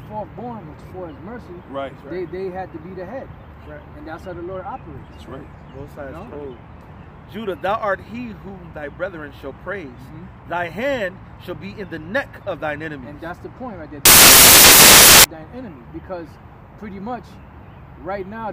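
From 14.05 to 15.24 s the sound is swamped by loud, harsh broadband noise that lasts a little over a second before the audio returns. This is a case of samples built from the wrong bytes: over that stretch the bytes of each sample were assembled incorrectly, whether shifted by one byte, taken in swapped order or read at the wrong alignment. The rapidly fluctuating low-order bits ended up as the dominant part of every value, producing broadband noise.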